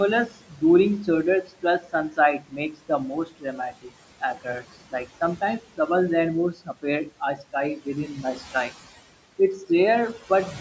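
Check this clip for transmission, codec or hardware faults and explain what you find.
Two faults are audible, both from the noise suppressor working on the room noise, which sits about 17 dB below the speech; the call microphone processing shows only as a band limit near 8 kHz.

Noise suppressor artifacts run through the whole clip. Between phrases the background drops away by about 17 dB, then climbs back under the speech. The suppressor judges each frequency band frame by frame and pulls down whatever it reads as steady noise.

Speech cut by the noise suppressor shows up from 0.26 to 0.63 s, 1.43 to 5.08 s and 6.53 to 8.71 s. Soft sounds and word endings fall away, by up to about 19 dB in the first two stretches and about 13 dB in the third. That adds up to roughly a third of a second, a second and a half and half a second. The suppressor mistook these quiet parts of the speech for noise and turned them down with it.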